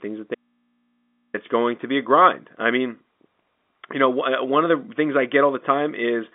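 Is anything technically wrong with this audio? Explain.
Yes. From 0.35 s to 1.34 s the speech vanishes for nearly a second, and the gap holds only a low mains hum roughly 40 dB under the speech level before the talker returns abruptly on "it's going to be". This is an audio dropout to a faint residue. The cut is sudden, not a pause or fade, so the likely cause is the wanted signal being lost while the input stayed live and picked up hum. The narrow telephone band from the G.711 line is audible throughout.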